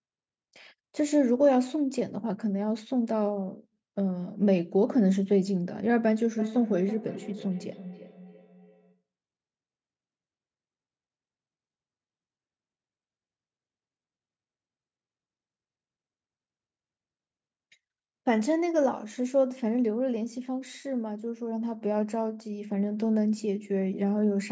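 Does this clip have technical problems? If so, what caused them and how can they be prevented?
Yes. From 6.38 to 9.03 s there is feedback echo between two devices: a second device in the same room was playing the call out loud, and its sound leaked back into the first microphone, where the echo canceller, handling only its own playback, let it through. Each stretch of speech returns about every 300 ms, thinner and ringing, peaking at about 14 dB below the speech. Keeping only one device joined per room, or muting the extra one, prevents it.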